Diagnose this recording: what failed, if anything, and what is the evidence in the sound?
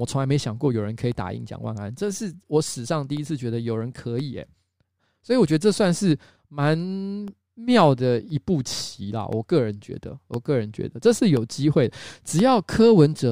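Periodic USB or driver dropouts: the bus or driver stalls every 1.024 s from 0.09 to 12.39 s, silencing roughly half a millisecond each time, heard as regular ticks.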